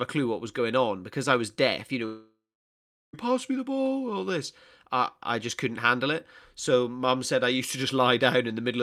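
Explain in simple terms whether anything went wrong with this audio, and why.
From 2.05 to 3.15 s the speech breaks off: the last sound smears into a fading buzz or hiss, then about 0.7 s of near silence, and it resumes with roughly a second missing. That's likely a long network dropout, where audio stopped arriving.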